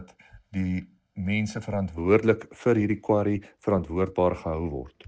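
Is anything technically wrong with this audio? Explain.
Yes. From 0.00 to 1.98 s there is channel delay (comb filtering): one channel lags the other by roughly 1.5 ms, and summing them cancels evenly spaced frequencies, starting near 400 Hz. The sound turns hollow and phasey, with fixed spectral notches.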